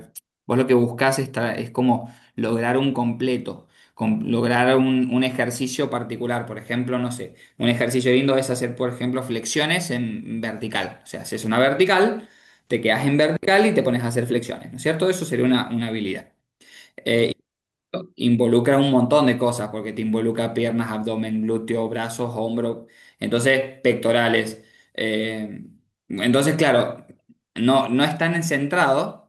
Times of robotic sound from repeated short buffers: none

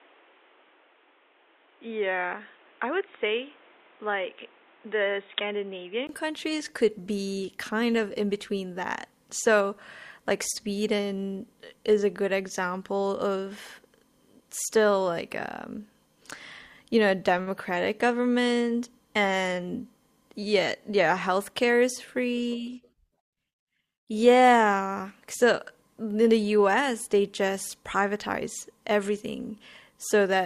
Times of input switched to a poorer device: 0.00-6.09

